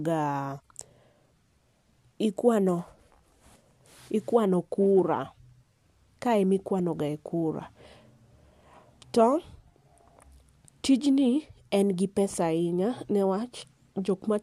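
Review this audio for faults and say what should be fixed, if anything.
No faults; nothing to fix.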